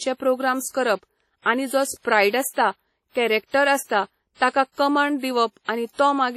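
The speech has likely been through WMA compression at a low bitrate, with damage this heavy fitting something near 32 kbps. The transform codec codes the signal in long blocks, so its quantisation error smears across tens of milliseconds and faint spectral detail is thrown away. From start to finish that gives a ringing, washy quality and a hiss that swells and fades with the speech, and nothing is present above 18 kHz.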